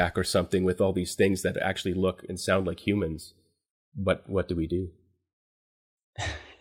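No technical faults can be heard anywhere in the recording; the signal stays continuous and steady throughout.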